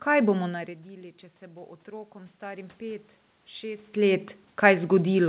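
Speech heard through a narrowband call path, with nothing above 4 kHz (consistent with G.711), shows automatic gain rising from 1.46 to 3.93 s. After the input fell by about 17 dB, the gain control lifted voice and room noise together by about 6 dB. The waveform envelope and spectrogram noise floor both swell gradually across that span.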